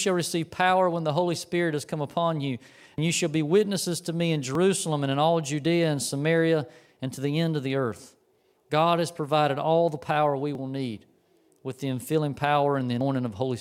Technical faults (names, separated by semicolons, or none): overlap between stream segments